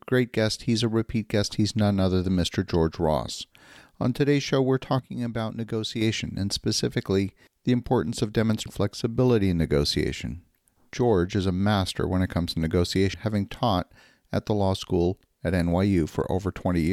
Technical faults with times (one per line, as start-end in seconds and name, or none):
4.99-6.01 one channel drops out
8.65 damaged data in a compressed stream
13.13 damaged data in a compressed stream